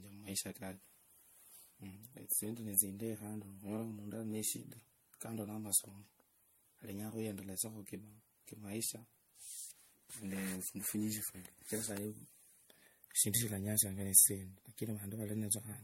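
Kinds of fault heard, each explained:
Generation loss: present throughout the speech, with nothing above 16.5 kHz and a swirly, hollow, smeared quality heavier than one lossy pass would leave, while consonant attacks sound blurred. The likely cause is repeated MP3 decoding and re-encoding, around five passes at a rate that fits 64 kbit/s. Each pass requantises the sound on a shifted frame grid, so the noise and spectral gaps from earlier passes pile up instead of cancelling.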